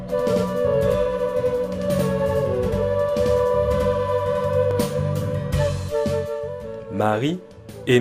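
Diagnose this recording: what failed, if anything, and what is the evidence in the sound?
Channel delay (doubling) from the driver or buffer stage. From the start to about 4.71 s, everything has a second copy trailing it by roughly 93 ms at the same level, so each onset comes out as a distinct slap echo. One channel is running a whole buffer late, and the offset fits a 4096-sample buffer. When the two channels are folded to mono, the late copy is heard separately after the early one. After 4.71 s the copy disappears as the channels line back up.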